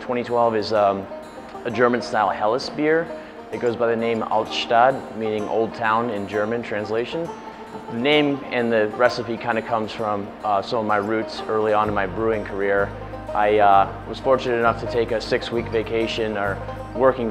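Two single-sample bit error spikes tick through the audio, at 6.34 s (about -30 dBFS) and 9.10 s (about -24 dBFS). Each is one flipped bit briefly jumping the sample value.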